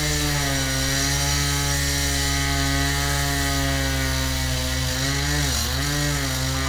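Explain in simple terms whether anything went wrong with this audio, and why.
Something did go wrong near the end. From about 4.73 s to the end, there's a time-stretched section. The audio suddenly runs almost twice as fast, about 1.92 times normal speed, yet the pitch doesn't rise the way it would on a sped-up tape. That's why it sounds rushed. The likely cause is software squeezing that part to fit a set length, keeping the pitch steady by cutting out lots of tiny slices.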